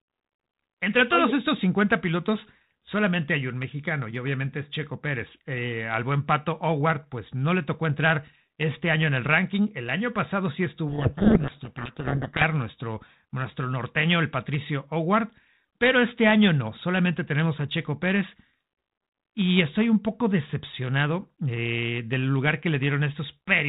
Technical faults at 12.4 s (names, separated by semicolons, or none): codec payload misread